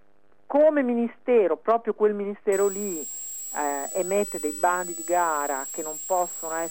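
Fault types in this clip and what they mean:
Switching supply whistle: a switching power supply running in an audible burst mode, or beating against another supply, leaks a high whistle into the signal. Here it appears at 2.52 s and lasts to the end, wandering between 7.6 and 7.9 kHz, roughly 10 dB below the audio.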